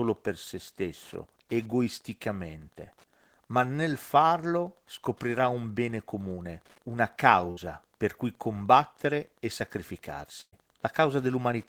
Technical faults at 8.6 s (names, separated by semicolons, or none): Wi-Fi interference